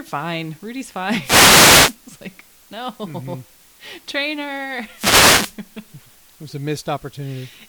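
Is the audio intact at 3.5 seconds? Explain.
No. Throughout the clip, including 3.5 s, there is low bit depth with dither: the samples were rounded to very few levels, which fits 8-bit audio, with dither added first, so the rounding error becomes a steady, even hiss roughly 35 dB below the speech, with no distortion.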